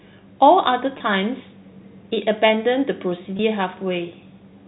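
Speech over a G.711 telephone line, band-limited below 4 kHz, with packet loss with pitch repetition at 0.98–1.00 s and 3.37–3.39 s. About 20 ms vanishes each time, consistent with two 10 ms packets, and the receiver bridges it by repeating the last pitch period. This leaves a brief held, buzzy tone: on a spectrogram, frozen flat harmonics; on a waveform, identical repeating cycles.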